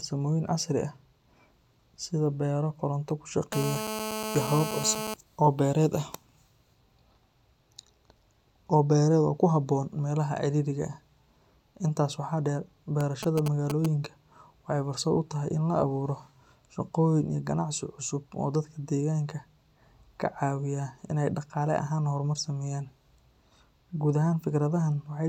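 Speech recording with two interference faults from a nearby 2G handset. The first is GSM phone buzz from 3.53 to 5.14 s, starting right after "sida beero koronto ku": a hard, raspy buzz at about 217 Hz, rich in harmonics and sitting about 6 dB below the speech. It holds nearly steady across its 1.6 s and bears no relation to the talker. The phone was in a call, transmitting bursts 217 times per second, and the audio circuit rectified those radio pulses into audible buzz. The second is GSM signalling bursts from 13.01 to 13.86 s, following "waxaa dheer". Here the interference is broken into a galloping dit-dit-dit of short 217 Hz buzzes, only a few dB under the speech. The handset was sending just brief groups of bursts while exchanging signalling with the network, and each group was again rectified into the audio path.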